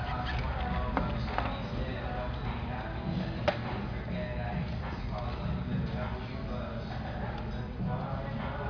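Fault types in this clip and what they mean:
No faults detected; the audio shows no audible defects.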